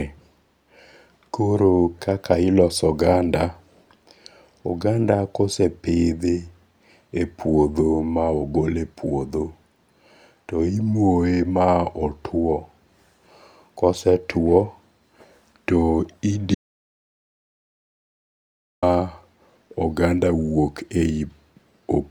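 A speech recording with an audio dropout to silence from 16.55 to 18.83 s: the sound cuts off mid-flow and returns about 2.28 s later, with no room tone between. The waveform shows a flat line and the spectrogram a fully blank band, likely from input lost while recording continued.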